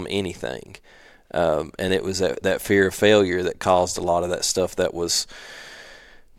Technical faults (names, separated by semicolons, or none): chunks out of order